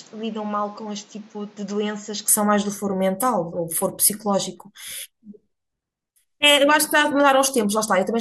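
Input switched to a poorer device, 0.0 to 2.28 s: the speech is duller, somewhat quieter and carries faint background noise, with nothing above 7.6 kHz, likely from a lesser microphone.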